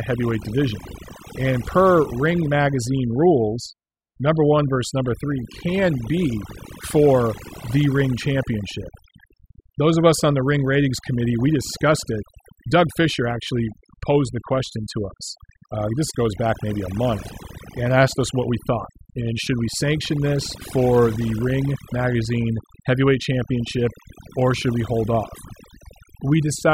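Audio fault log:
Throughout: overdone noise removal. A noise reduction process set too aggressively pulls individual frequency bands down to nothing wherever they sit close to its noise estimate. Quieter parts of the speech vanish along with the noise, leaving near-silent gaps with twinkling specks.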